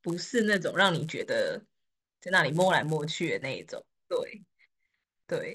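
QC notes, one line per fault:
Throughout: resampler restarted on every block. A buzz at 100 Hz rides under the speech and drops away in the pauses. The audio was resampled in separate 10 ms pieces during a conversion from 16 kHz to 48 kHz. At each piece's edge the converter lacked the true neighbouring samples. So every edge carries a small error. Those errors repeat 100 times a second and fuse into a buzz rather than separate ticks.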